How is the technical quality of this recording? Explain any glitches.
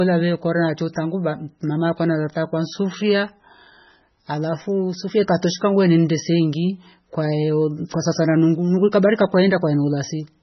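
The technical quality is poor, with heavy compression damage across the whole recording. MP3 compression, present throughout, likely explains it: the encoder dropped everything above about 5.9 kHz and zeroed weak frequency lines that flicker between frames. The speech therefore sounds dull, watery and swirly, with chirpy, metallic sibilants and smeared attacks, which points to a very low bitrate, around 16 kbps.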